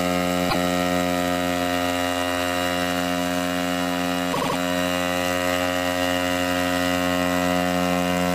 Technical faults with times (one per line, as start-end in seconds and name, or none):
0.48-0.55 repeated frames
4.32-4.56 repeated frames